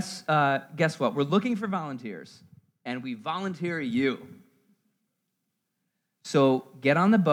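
A speech clip with zipper noise from 1.2 to 1.77 s and again from 3.82 to 4.34 s, just after "and we volunteer": unsmoothed 2 dB gain steps, roughly ten per second, click audibly as the level drops and then rises by around 10 dB.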